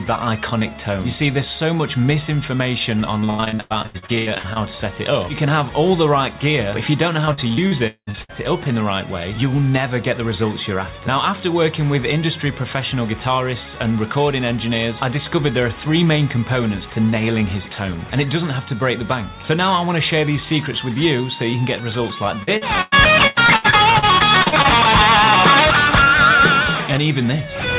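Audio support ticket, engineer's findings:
Repeated packet loss (robotic sound), 3.2–4.58 s, 7.26–8.31 s, 22.43–24.66 s: packets repeatedly lost or late in the network/jitter buffer, with concealment extending the last sound over each hole. The result is choppy audio with pieces missing. Gaps run up to 100 ms in the first burst, with about half that span concealed. The second burst has the longest gap, near 200 ms. In the third, gaps are sparser, about a quarter concealed. Nothing above 4 kHz throughout, consistent with a G.711-type call codec.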